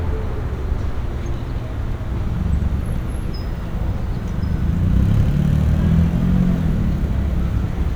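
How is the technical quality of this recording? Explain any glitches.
The recording has no technical glitches to explain. Nothing in the sound points to a fault in how it was captured, processed or delivered.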